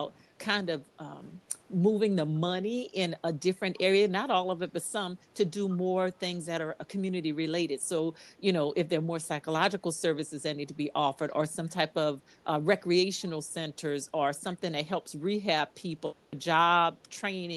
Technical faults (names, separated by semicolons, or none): echo leak